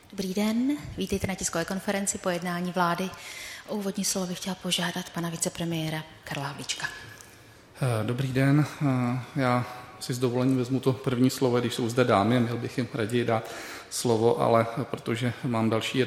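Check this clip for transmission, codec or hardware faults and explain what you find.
No transmission, codec or hardware faults.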